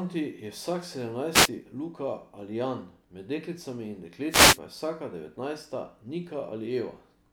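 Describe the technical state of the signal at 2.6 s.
At 2.6 s the speech signal is intact, with no audible fault at that moment.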